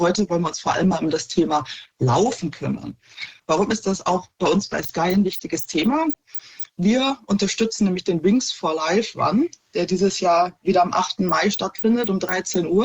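From the start until 6.0 s the audio plays as an adaptive stream starting at a low bitrate. The player opened on a cheap version so playback could begin at once, then switched up after gauging the connection. Until then the treble is dull or synthetic, with smeared artefacts, which fits roughly 16 kbit/s Opus. At 6.0 s clarity jumps abruptly, fitting about 64 kbit/s. A spectrogram shows a low ceiling that suddenly lifts, while the waveform continues without any gap.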